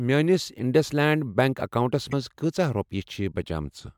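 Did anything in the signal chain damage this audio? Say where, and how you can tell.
Yes: a brief glitch at 2.08–2.14 s, damaged data in the compressed stream, where the decoder lost frame sync and jumped ahead to the next header.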